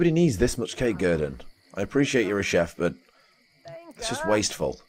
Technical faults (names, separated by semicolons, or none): call bitrate drop